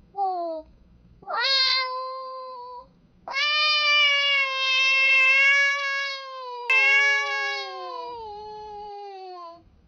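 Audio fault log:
6.70 s to end: doubled audio track. From 6.70 s a second copy of the same full-band sound runs alongside the original, trailing it by roughly one and a half seconds at about the same level, and it continues to the end of the clip. The copy enters abruptly and carries no decay or added room colour, so it is not an echo. The likely cause is the signal being captured again through a slower path, or an edit leaving two out-of-step copies.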